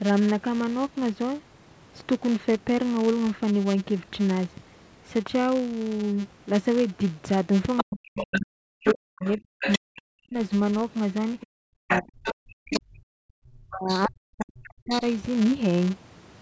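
A speech recording in which a filter in the processing chain restarts on every block, forgetting its state each time and starting from silence, so each block opens with a small transient. Heard across the whole clip, this is a buzz at 200 Hz, which fits a block length of 5 ms, and it rises and falls with the loudness of the talker. The talker's device was most likely playing the far side on a loudspeaker while the echo canceller failed to strip it from the microphone, leaving the other side's voice leaking through: a second voice roughly 5 dB below the talker from 7.77 to 9.79 s and from 11.4 to 12.8 s, then briefer, quieter scraps about 10 dB down at 13.91 to 14.01 s and 14.65 to 15.01 s. Where both sides talked at once, the canceller likely could not tell its own talker from the echo and pulled both down, so the speech is suppressed in double talk from 7.83 to 10.38 s and again from 11.72 to 15.03 s. 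The talker's voice sinks, dulls and breaks into pieces, dropping by as much as around 40 dB, for roughly two seconds in each stretch. The call microphone processing, with no content above 8 kHz, is ordinary for this kind of path.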